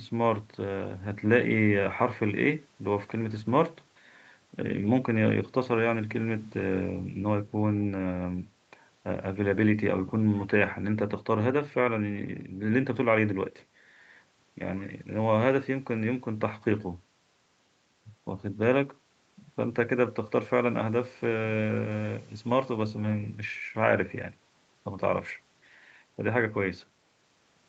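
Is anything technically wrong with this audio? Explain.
No, nothing's wrong here: the speech just sounds like it came over an ordinary call, with the lowest bass trimmed by the microphone processing and nothing above about 8 kHz, which is what you'd expect from the call codec and isn't a problem.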